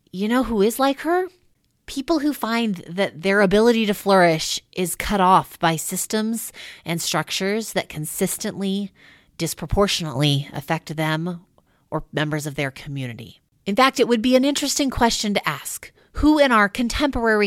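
At 10.16 s the speech and its background noise leap together by about 9 dB in a single step, holding that level until 10.56 s. This sudden gain jump likely comes from a digital gain setting applied instantly, sample to sample, with no ramp.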